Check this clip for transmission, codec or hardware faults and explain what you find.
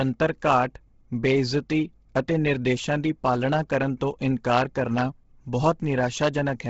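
One codec fault runs through the whole clip. Bluetooth LC3 compression, present from start to finish: the speech was likely carried over LC3 at a low rate, which fits about 16 kbps. The transform codec discards much of the upper spectrum and fills the gaps with noise, leaving nothing above 7.7 kHz and giving the speech a heavily breathy, grainy edge.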